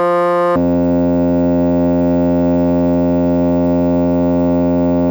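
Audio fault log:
0.56–5.1 s: stereo read as mono. From 0.56 s the music drops to half speed and sits a full octave (12 semitones) low, because interleaved left and right samples are being played out in sequence as one channel, doubling the sample count per moment of sound. A faint mirrored copy appears in the upper spectrum.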